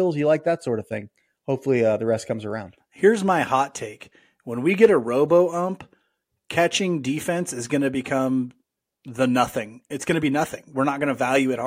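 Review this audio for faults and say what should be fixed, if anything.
Nothing stood out on listening to this speech recording, so there is nothing to fix.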